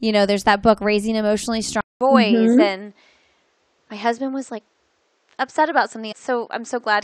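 A speech recording that, after "that book raising emotionally" at 1.81 s, drops out for 200 ms and comes back duller and about 5 dB quieter, with nothing above 8.2 kHz and a new noise floor far below the speech. The likely cause is an input switched to a poorer device, which holds until the end. At 6.11 s a small blip marks a jump ahead in the audio, where a stream segment was likely skipped and that stretch of the programme is missing.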